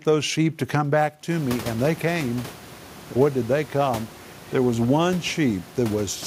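No technical faults are present in the speech; the room noise that steps up by about 21 dB around a second and a half in belongs to the recording space and stays about 20 dB under the voice.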